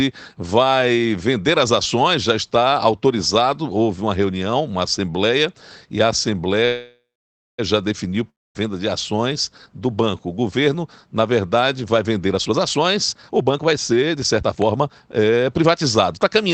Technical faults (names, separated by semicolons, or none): call audio freeze; long network dropout; jitter buffer speed-up